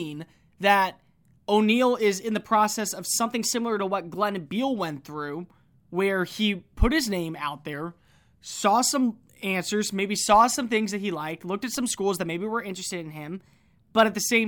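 Right after "in the process of", at 3.26 s, the speech jumps up about a semitone (106 cents) and runs 6.3% fast until 4.47 s, then snaps back. That's a drift correction step, likely a clock-matching resampler changing rate all at once to manage its buffer. It happens again after "put his name out", dropping 113 cents and 6.3% slow from 7.73 to 8.64 s before "some answers maybe saw". After "schools that maybe were", it goes sharp and fast again from 12.70 to 14.03 s.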